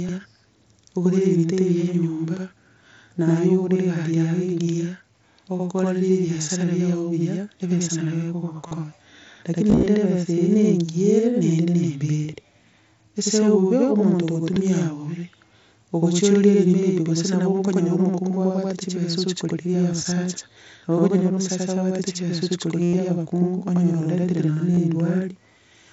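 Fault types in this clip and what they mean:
channel delay (doubling): The speech carries a constant equal-level slap echo 85 ms behind, from one channel running late by a long buffer before mono summing.
concealed Bluetooth headset packet loss: Short buzzy held tones ending in a slight warble, longest after "omosacha abwate chibesa ochia"; lost headset packets were patched by repeating recent waveform.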